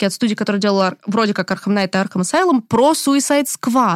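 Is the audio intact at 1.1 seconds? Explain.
No. Hard clipping runs through the whole clip, so 1.1 s is affected like everywhere else. The speech is pushed about 2 dB past what one stage can pass, and the peaks that exceed that ceiling, only a small fraction of the samples, around half a percent, are sliced flat. Those squared-off tops add high harmonics, heard as brief crackle on the loudest syllables. Soft clipping would instead round the peaks and sound like a warmer, smoother thickening.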